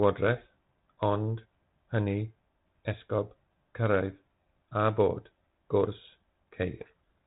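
From 6.81 s to 7.25 s, near the very end, the speech is buried under harsh, gritty distortion. This is a codec payload misread. The sender and receiver disagree on the bit order inside each G.726 code word. The decoder still gets frames that look valid, but it takes every difference value from the wrong bits, so its adaptive prediction goes wrong. Before this, the audio has the light, band-limited character of G.726 ADPCM, consistent with the 32 kbit/s rate.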